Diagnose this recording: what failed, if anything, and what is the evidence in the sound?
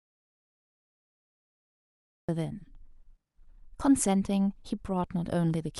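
The clip opens in an audio dropout to silence: from the start until 2.29 s there is silence, with no room tone, before the speech cuts in mid-flow. The input was likely lost at the device or link while recording continued writing zeros.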